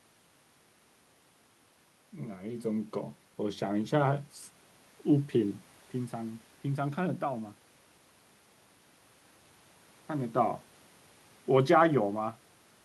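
From 2.12 to 4.29 s the speech and the room noise behind it swell together by about 4 dB over roughly two seconds. This is automatic gain rising: the gain control judged the input too quiet and gradually raised its level, lifting everything at once.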